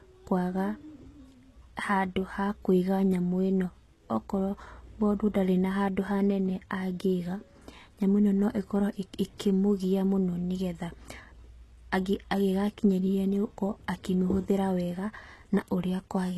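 Speech, with plainly audible HE-AAC compression throughout. S sounds turn gritty and metallic. Nothing reaches above 12.3 kHz. The likely cause is HE-AAC at a bitrate near 16 kbps.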